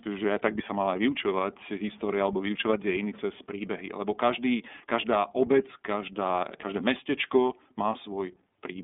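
Speech squeezed through the iLBC codec the whole way: nothing above 3.8 kHz, a thin phone band, and a rough, synthetic edge that fits its 30 ms frame mode.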